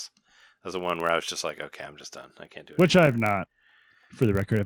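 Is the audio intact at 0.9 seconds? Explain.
No. At 0.9 s, as throughout, a block size mismatch (padded) zero-fills the end of each block, adding a 46.9 Hz buzz that fits 1024-sample reads, with negligible slowdown.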